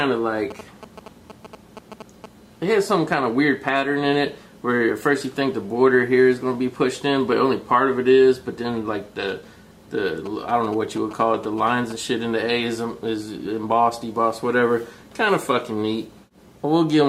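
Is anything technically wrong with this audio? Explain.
Yes, there are GSM signalling bursts from 0.50 to 2.26 s and again from 10.26 to 11.92 s: a galloping run of ticks and short buzzes at about 217 Hz, roughly 15 dB under the audio. A nearby 2G phone is signalling, and the audio circuitry rectifies its radio bursts.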